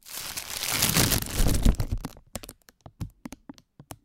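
At 1.69 s, a peak about 4 dB beyond what one stage could pass was cut flat, so this hard clipping is heard as a brief crackle.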